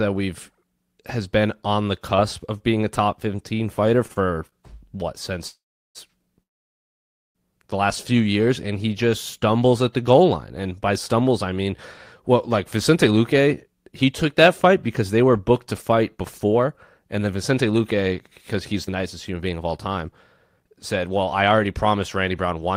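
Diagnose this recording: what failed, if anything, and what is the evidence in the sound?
At the network and jitter-buffer stage, packets repeatedly arrived too slowly between 4.07 and 4.55 s, so the buffer ran dry four times. This is a repeated stalls (stutter) pattern. The receiver stretched the last sound across each gap, the longest 29 ms and about 84 ms in total. Nothing is lost, but the speech catches and drags.

At 5.48 to 5.98 s and again at 6.43 to 7.38 s the speech halts. It leaves a brief fading tail and then silence, about 0.37 s in the first gap and almost all of the 0.92 s in the second, before resuming exactly where it stopped. This is a call audio freeze, likely from packets held up in the network until the buffer emptied.

Later, the receiver shed a backlog in three jitter buffer speed-up passes. The first ran from 12.76 to 18.12 s at 108% speed, removing roughly 0.4 s. 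The second ran from 18.54 to 20.09 s at 120%, removing roughly 0.3 s, and the third from 20.60 to 22.67 s at 110%, removing roughly 0.2 s. Pitch-period slices were dropped, so the speech sounds hurried at unchanged pitch.

Inside the second speed-up pass, at 18.87 to 18.90 s, about 40 ms of packets never reached the decoder. This is a short concealed packet loss. The receiver bridged only a sliver and blended back into the real audio, so a brief smear or wobble replaces that fragment of speech.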